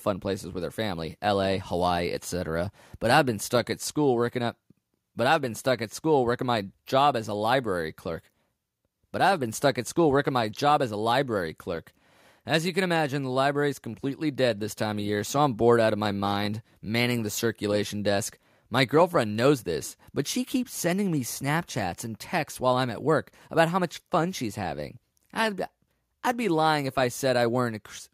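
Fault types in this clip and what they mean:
No faults can be heard.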